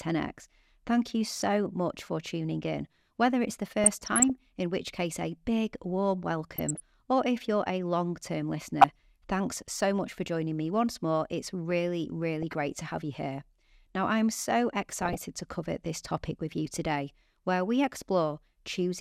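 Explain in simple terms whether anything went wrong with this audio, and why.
Yes: DAB burbling at 1.25–1.47, 3.84–4.30, 6.56–6.80, 8.81–8.91, 12.42–12.55 and 15.01–15.22 s. Weak reception let bit errors corrupt the digital speech stream, producing short blips of noise.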